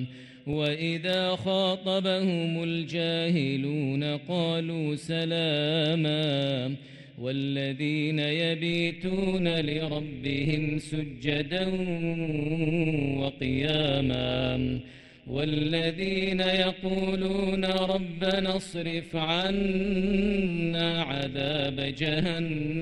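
From 8.73 s to the end at 22.81 s, windowed frames are being rejoined with an overlap that fails to sum to constant gain, producing overlap-add ripple: the level pumps by about 11 dB at roughly 150 Hz, a metallic buzz with extra tones around each note.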